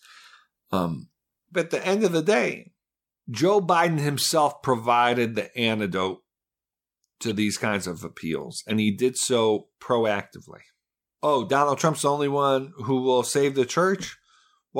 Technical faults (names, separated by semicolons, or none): corrupt frame decoded